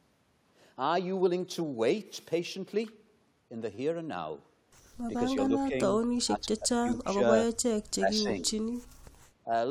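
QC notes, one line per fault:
3.75–3.78 s: repeated buffer. A 10 ms slice plays three extra times with hard joins, giving a brief buzzy stutter; no audio is lost.
5.48–5.75 s, 6.24–7.21 s, 7.93–8.51 s: speech suppressed in double talk. The speech dips in pieces by roughly 15, 20 and 30 dB, likely the echo canceller ducking both talkers.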